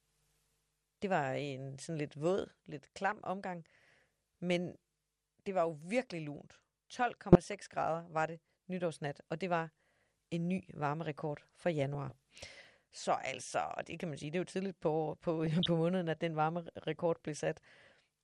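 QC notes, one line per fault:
Throughout – MP2 compression: dull, gurgling, granular speech with upper sub-bands dropping out, which fits a likely Layer II encode around 80 kbps.
3.12–3.24 s, 7.32–7.53 s, 11.95–12.17 s, 15.44–15.70 s – DAB burbling: short blips of noise in single sub-bands, after "sådan lidt våd lidt", "en ny varmerekord for" and "jo tidligt på på", as bit errors in the MP2 data put wrong samples into single sub-bands.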